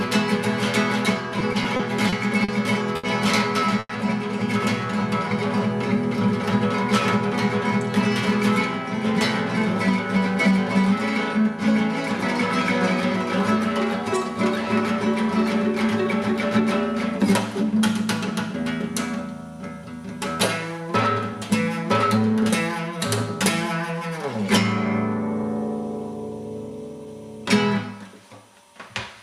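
From 1.39 to 3.91 s the sound drags and stutters through eight brief holds, the longest 100 ms, that add 300 ms in all while nothing is lost. These are repeated stalls: late packets kept emptying the jitter buffer, and the receiver stretched the last sound, fading it during longer waits.

Between 10.16 and 11.76 s the sound runs slightly faster at unchanged pitch, about 2% fast, and again from 15.62 to 17.64 s at about 3%. This is jitter buffer speed-up: holding surplus audio, the receiver cut short pitch-period pieces in succession, dropping a few tens of milliseconds in the first stretch and around 70 ms in the second.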